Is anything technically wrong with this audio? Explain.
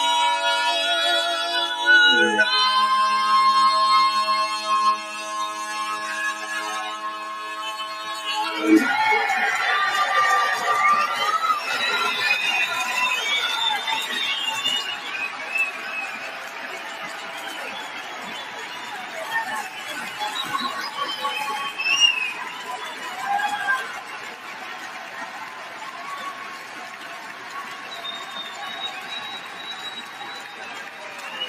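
Yes. A noise suppressor designed for speech has been left running on this material, and it treats sustained, steady content as if it were noise. Throughout the clip the gain it applies swings by roughly 10 dB. Onsets get through largely intact, but held sounds and decaying tails are pulled down, so the audio pumps and thins. On a waveform, the envelope dips shortly after each attack. On a spectrogram, sustained bands fade unevenly and look patchy.

The sound cut by the noise suppressor is most obvious at 6.93–8.06 s, 14.97–15.38 s, 15.75–17.45 s, 17.83–19.15 s, 24.01–28.59 s, 28.95–29.63 s and 30.01–31.28 s. In these stretches the suppressor judged the sustained content to be noise and turned it down by about 4 to 5 dB. The longest affected span runs from 24.01 to 28.59 s. Decays are cut short, and the level sags audibly. A spectrogram shows the energy thinning abruptly rather than tapering naturally.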